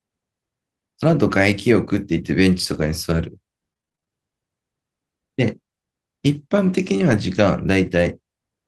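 Between 1.03 and 4.10 s the speech picks up scattered short gaps, about ten of them spread across that stretch, none longer than roughly 30 ms. Each one is a late or lost packet that the receiver papered over by stretching the last bit of sound forward. Taken together they sound like around 180 ms gone and roughly 150 ms patched. You hear it as little ticks, smears and hiccups while the speech stays clear.

Later, from 6.97 to 7.15 s, there's a lost packet rebuilt from error correction, and the sound points to a handful of separate losses. Nothing drops out, because the packet after each loss carried a low-bitrate Opus copy that the decoder played in its place. That covers about 100 ms, and those rebuilt moments come through rougher and noisier than the speech around them.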